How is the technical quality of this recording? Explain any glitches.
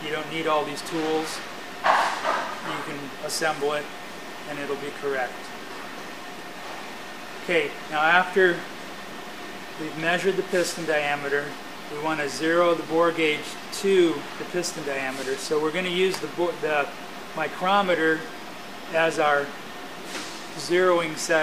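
The technical quality of this recording is sound, with no glitches to explain.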